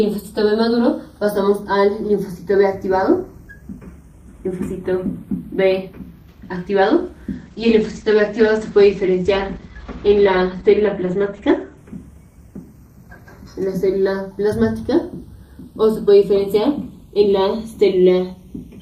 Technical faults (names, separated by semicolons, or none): channels drifting apart; call bitrate drop